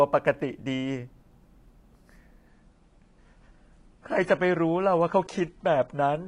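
From 2.48 s to the end, the speech abruptly loses its top end, with nothing above 10.5 kHz, and takes on a duller, more artefact-laden codec texture, with no gap at the switch. This is an adaptive stream at a lower bitrate, consistent with a step down from about 96 to 32 kbit/s.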